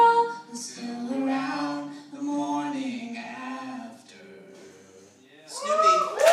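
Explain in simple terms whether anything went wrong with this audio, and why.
Nothing went wrong with this audio that a careful listener can pick up. At no point does the sound do anything that would point to a technical problem.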